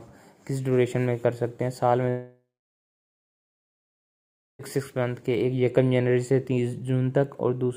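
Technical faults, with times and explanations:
2.09–4.61 s, long network dropout: about 2.5 s of sound is gone. There's a short fading buzz for roughly a third of a second, then about 2.15 s of silence. The receiver likely stretched the last audio it had before giving up, and the sound resumes with the gap simply skipped.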